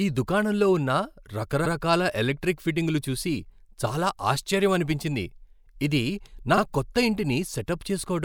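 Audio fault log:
1.65–1.72 s and 6.57–6.61 s, repeated frames: a brief stutter, first a 72 ms stretch just before "ఎలక్ట్రిక్ ఫిట్టింగ్లు చూసి చాలా", then a 48 ms stretch just after "ఇది నా". Each block of compressed frames, fitting runs of three and two frames, was decoded twice, so the same slice plays again and the audio runs 72 ms and 48 ms longer.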